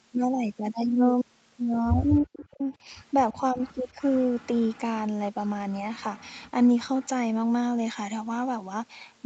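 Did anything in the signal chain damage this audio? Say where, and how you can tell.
Yes. The damage sits in the call processing stage, in the echo canceller, and shows up as speech suppressed in double talk. The level collapses from 2.23 to 2.87 s, by roughly 40 dB at its deepest, across about half a second. Shallower dips follow at 3.33 to 3.61 s (about 10 dB) and 3.94 to 4.01 s (about 5 dB). The sound is pulled down most likely because the canceller was ducking while the far side talked.

The second fault is echo leak, a faint delayed copy of the speech. It appears at 2.73 to 3.04 s, lagging by 328 ms and sitting about 35 dB below the speech. It returns at 3.35 to 4.8 s and 5.49 to 7.08 s, lagging by 374 ms at about 25 and 30 dB down. Room reverberation would decay smoothly, but here the copy arrives at a fixed lag, which points to loudspeaker pickup the canceller likely failed to remove. 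The band stops near 8 kHz, which fits a wideband Opus call.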